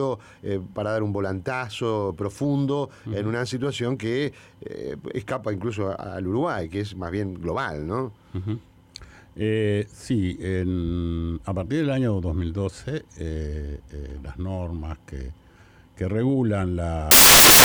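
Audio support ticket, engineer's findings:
Samples built from the wrong bytes, 17.11 s to 17.65 s, running into the end of the file. Loud broadband hiss replaces the sound for about 0.53 s. Probable component is the sample reader or decoder misframing bytes (offset, swapped order or wrong alignment), so noisy low bits become the dominant part of each value. Spectrogram shows a flat full-band wash; the waveform is a dense block.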